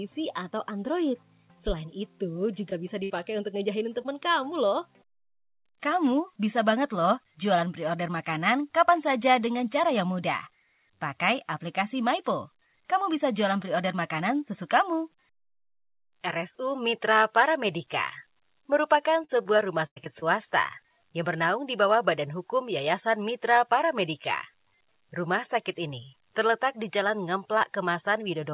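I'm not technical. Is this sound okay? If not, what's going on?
No, there are a few dropouts from the call connection.

Around 2.7 s and again near 4.0 s you'll hear a short concealed packet loss: about 20 ms of audio never arrived, so the receiver stretched the previous sound over the hole. It comes across as a tiny smear or wobble.

At 3.04 to 3.12 s there's a burst of packet loss, a longer hole of about 60 ms. The receiver held the last sound and let it fade, then jumped ahead, so a chunk of the audio is simply missing.

From 19.24 to 20.24 s comes repeated packet loss (robotic sound): six gaps in about a second, the longest about 97 ms, with roughly a fifth of that stretch patched over. Those back-to-back patches make it choppy and mechanical.

The whole clip also has that narrow, phone-like quality, since the call path carries nothing above 4 kHz.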